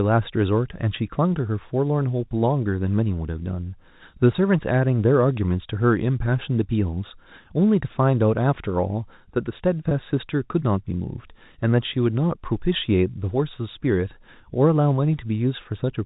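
At 9.89 to 9.91 s there is packet loss with pitch repetition: about 20 ms of speech went missing, consistent with two lost packets, and the receiver bridged the gap by repeating the last pitch period, heard as a brief buzzy hold over the G.711 telephone band.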